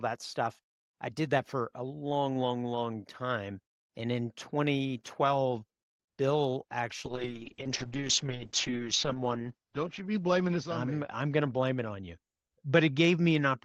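Speech carried over an Opus call path shows a call bitrate drop from 7.07 s to the end: the sound turns rough and watery, which points to roughly 32 kbps falling near 7 kbps. On a spectrogram the top edge drops from 12 kHz to 8 kHz, with smeared, blotchy detail.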